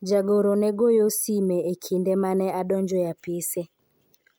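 Nothing goes wrong anywhere in this bit of speech; there's no fault to point to at any moment.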